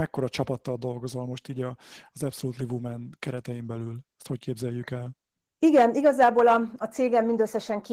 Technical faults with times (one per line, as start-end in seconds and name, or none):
0.00-7.92 Opus voice compression
5.65-6.57 hard clipping